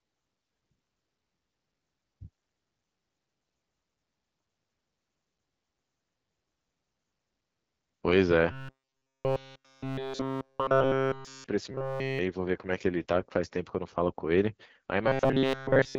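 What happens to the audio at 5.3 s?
At 5.3 s the speech sounds rough and raspy, with no content above about 7 kHz, as it does through the whole clip. This is AMR wideband (HD Voice) codec damage: the vocal-tract model falters at one of its lowest rates, consistent with 8.85 kbit/s.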